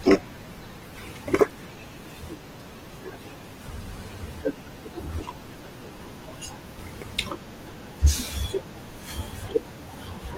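From 0 to 6.0 s the speech sounds dull and smeared, an adaptive stream starting at a low bitrate. The spectrogram shows missing treble until it abruptly fills in, gaplessly.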